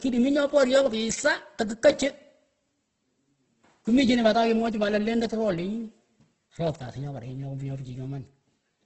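Throughout the speech, the audio points to heavy Opus compression in its music mode, likely at a rate around 12 kbps. With too few bits, bands are filled with noise, so the sound turns rough and grainy, with nothing above 8.1 kHz.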